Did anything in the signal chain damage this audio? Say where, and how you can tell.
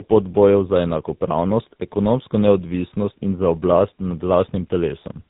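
Yes, at the codec stage, throughout. The speech is rough, muffled and warbly, with nothing above 3.8 kHz. This is tandem speech coding. The sound points to two speech coders in a row, likely AMR-NB then GSM full rate, the second re-coding the first's damage.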